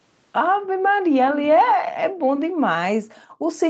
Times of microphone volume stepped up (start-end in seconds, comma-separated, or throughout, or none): none